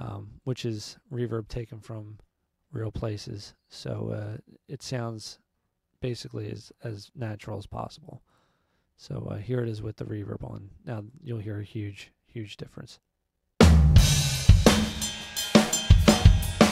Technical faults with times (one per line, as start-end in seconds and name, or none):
none